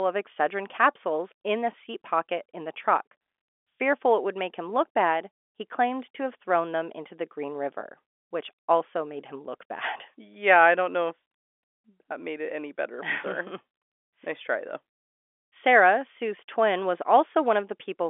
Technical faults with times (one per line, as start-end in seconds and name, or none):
none